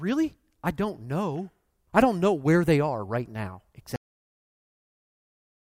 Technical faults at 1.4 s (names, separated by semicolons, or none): none